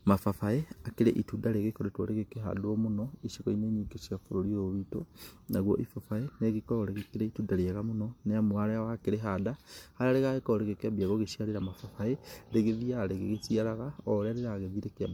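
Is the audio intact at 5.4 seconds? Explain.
No: generation loss likely from around seven passes through MP3 encoding runs through the whole clip, leaving the speech at 5.4 s swirly, hollow and smeared, with blurred attacks.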